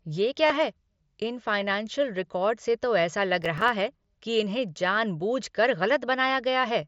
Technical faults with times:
0.46-0.50 concealed Bluetooth headset packet loss
3.42-4.04 processor overload crackle

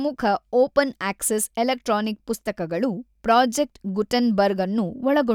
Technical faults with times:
none

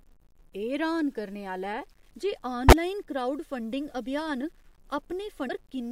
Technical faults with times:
0.00-5.92 low bit depth without dither
2.68-2.73 damaged data in a compressed stream
5.45-5.50 damaged data in a compressed stream

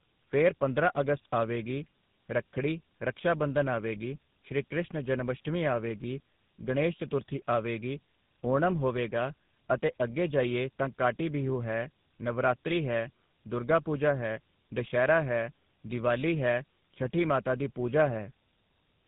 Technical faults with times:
0.00-19.07 tandem speech coding

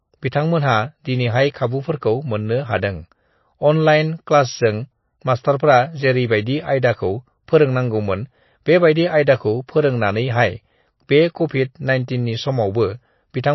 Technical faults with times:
0.00-13.54 MP3 compression

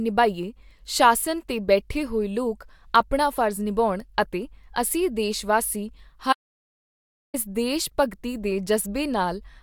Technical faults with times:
6.33-7.34 audio dropout to silence

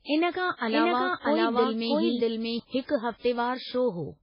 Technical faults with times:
0.00-4.22 MP3 compression
0.55-0.60 pre-echo
0.71-2.59 doubled audio track

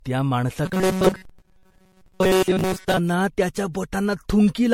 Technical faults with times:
0.00-4.73 generation loss
0.66-2.97 robotic sound from repeated short buffers

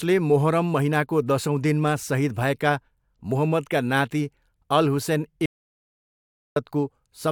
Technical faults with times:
5.46-6.56 audio dropout to silence

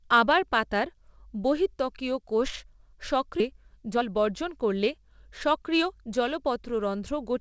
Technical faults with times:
3.40-3.42 skip ahead
3.52-6.79 jitter buffer speed-up

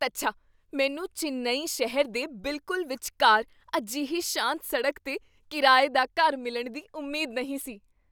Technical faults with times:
none

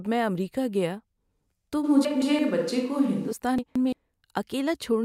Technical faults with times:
1.86-3.31 switch to a distant microphone
2.05-2.39 chunks out of order
3.58-3.93 chunks out of order

